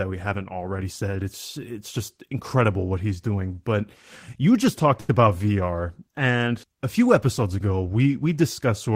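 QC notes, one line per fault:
5.00–5.21 s, short stall from a late packet: just after "you just talked", the next packet arrived late and the jitter buffer ran dry, so the receiver held the last sound for about 84 ms until the packet turned up, then resumed from the same point. Nothing is skipped, but the held stretch sounds drawn out with a faint buzzy or slightly dipped quality, and everything afterwards plays about 84 ms later than before.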